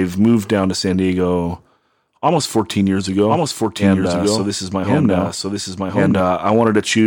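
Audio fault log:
3.28–6.20 s: doubled audio track, a dry full-band copy about a second behind at similar level, cutting in and out abruptly, likely from a second capture path or misaligned edit.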